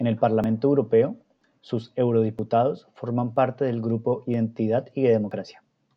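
The speech skips six times, at 0.44, 1.41, 2.39, 3.36, 4.34 and 5.31 s. Each skip is tiny, roughly 30 ms of sound gone. The one at 3.36 s falls just before "del grupo", and the one at 4.34 s just after "del grupo". The skips come about once a second, so this is most likely audio missing between chunks. The recording path seems to handle sound in one-second blocks and drop a sliver at each handover. The two sides then butt together with no gap.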